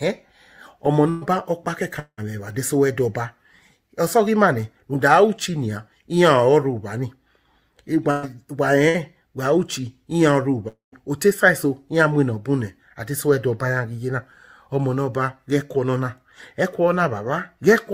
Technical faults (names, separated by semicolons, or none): burst of packet loss; long network dropout